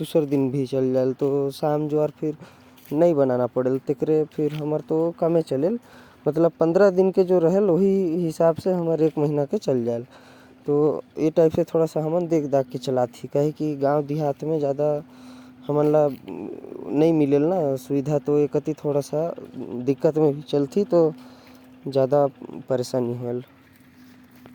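A speech recording, with no technical fault to report. Nothing in it calls for a time, a cause or a correction.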